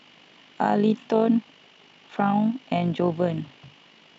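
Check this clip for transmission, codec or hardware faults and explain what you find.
The speech carries overlap-add ripple throughout. The frames were resynthesised with windows whose overlap fails to sum to a flat gain, so the level swings by about 6 dB once per frame, around fifty times a second, giving a fast, rough flutter.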